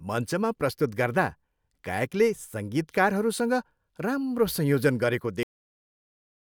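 A speech recording with a cut-off end: at 5.43 s the sound stops mid-utterance and drops straight to digital silence for the final second, because the last buffers were never written. The waveform shows a hard edge to a flat line, and the spectrogram goes abruptly blank with no decaying tail.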